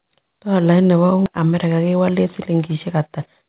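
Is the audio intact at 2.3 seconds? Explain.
No. From 1.38 to 3.43 s, a jitter buffer speed-up is underway: the receiver, holding too much queued audio, cut out short pitch-period slices repeatedly, around 150 ms in total. The speech runs about 7% faster at unchanged pitch and sounds hurried.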